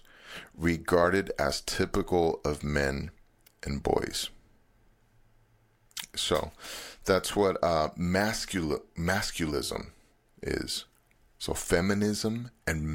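Listening closely to the speech, nothing stood out as a technical problem at any point.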